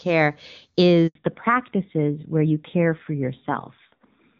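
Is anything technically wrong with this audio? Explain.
Yes, there are two faults in this speech.

Handover gap, 1.07 to 1.15 s: during a network switch no speech frames arrived, so the sound cuts out for 80 ms and that stretch is lost.

Fallback to narrowband, from 1.15 s to the end: the call dropped from clear HD Voice to a narrowband codec, likely AMR-NB at 7.4 kbit/s. Nothing above 4 kHz remains, so speech sounds duller and rougher.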